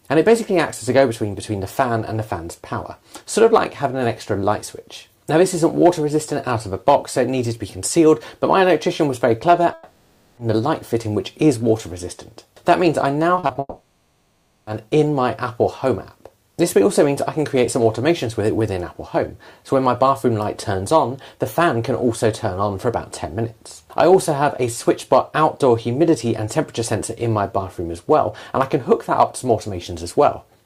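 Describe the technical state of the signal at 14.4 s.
At 14.4 s the signal sits inside a long network dropout from 13.59 to 14.69 s. About 1.1 s of audio is likely lost in transit and replaced by a fading concealment buzz. On a spectrogram this shows as a smeared, featureless band that thins toward a brief silent gap before the sound resumes.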